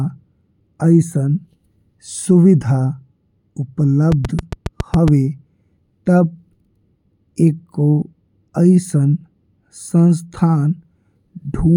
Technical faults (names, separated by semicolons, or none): train of clicks